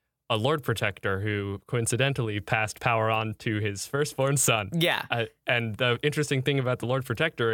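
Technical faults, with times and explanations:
No technical faults can be heard in this clip.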